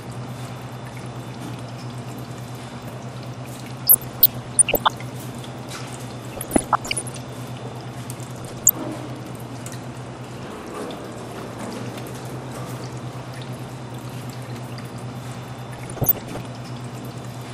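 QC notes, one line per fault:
Throughout: MP2 compression, likely at a low rate around 80 kbps. The sound is dull and a bit gurgly, with upper sub-bands dropping in and out and what's left sounding grainy. Plainly audible throughout, the usual starved-Layer-II character.
3.87–4.88 s, 6.37–7.16 s, 8.36–8.72 s and 15.79–16.39 s: DAB burbling. Short blips of noise sit on top of the sound. Bit errors are slipping past error correction, so wrong samples put noise into single sub-bands. Reception looks weakest around 8.4 s, with a bit error rate of roughly 1%.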